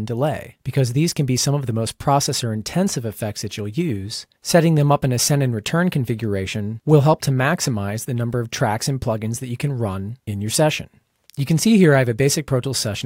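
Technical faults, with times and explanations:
No technical faults can be heard anywhere in the audio. There is nothing here that needs a time or an explanation.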